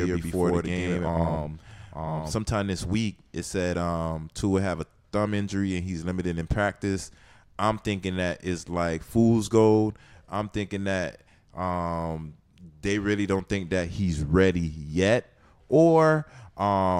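Until 2.32 s, a doubled audio track: an equally loud copy lags about 0.1 s, likely from a second capture path, doubling every waveform onset.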